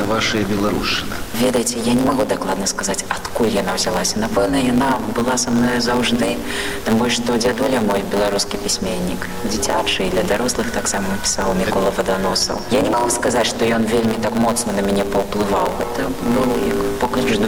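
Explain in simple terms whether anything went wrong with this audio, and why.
Something did go wrong: a block size mismatch, with the excess truncated. One stage of the system hands over chunks of audio that are slightly bigger than the next stage expects, so the tail end of every chunk is simply dropped. From start to finish, those regular little gaps produce a steady buzz at about 109 Hz, and because pieces keep going missing, the sound runs about 1.09 times too fast while keeping roughly its normal pitch.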